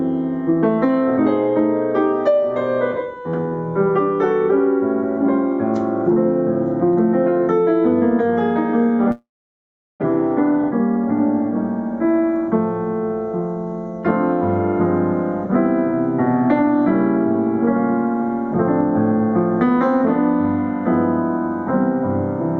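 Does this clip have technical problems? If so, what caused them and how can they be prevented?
Yes. At 9.11 s the sound breaks off in a long network dropout until 10.04 s. The receiver stretches the last sound into a fading buzz, then leaves near silence for about 0.75 s. The audio resumes with roughly 0.6 s missing. A likely cause is lost or stalled packets. A more robust network path or forward error correction would help prevent it.

From 15.92 s to 16.81 s a jitter buffer speed-up makes the sound run about 4% fast at unchanged pitch. The buffer held excess audio, so the receiver cut short pitch-period pieces, around 50 ms in all. Steadier packet delivery avoids this.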